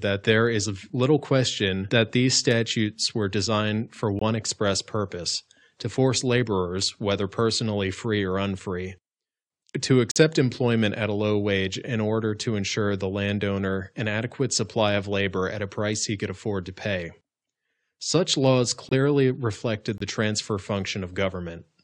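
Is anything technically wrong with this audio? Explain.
Yes. The speech has four corrupt frame muted gaps: at 4.19 to 4.22 s, between "statutes were designed for" and "express purpose to force"; 10.11 to 10.17 s; 18.89 to 18.93 s, just before "reflected the transfer"; and 19.98 to 20.02 s, just before "the transfer". Damaged compressed frames were rejected by the decoder and replaced with silence. Each gap cuts in abruptly, fits one or two frame lengths, and keeps the timing intact, which sets it apart from a skip or a smoothed-over concealment.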